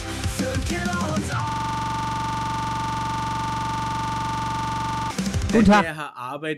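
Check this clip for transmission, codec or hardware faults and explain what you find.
A system hang loop runs from 1.49 to 5.11 s. A frozen system left the hardware replaying one 42.67 ms ring buffer, likely 2048 samples, producing a rapid 23.4 Hz buzzing stutter.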